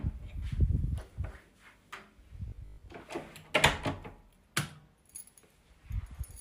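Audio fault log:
2.48–2.88 s, robotic sound from repeated short buffers: a rigid metallic 50 Hz buzz, likely from about half the audio being replaced by repeats of one 20 ms slice.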